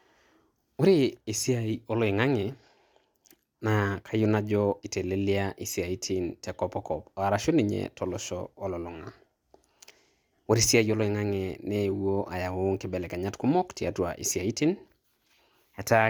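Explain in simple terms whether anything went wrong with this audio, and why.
Nothing went wrong here; the recording of speech carries on steadily the whole way, with no interruptions, jumps or odd sounds to point to.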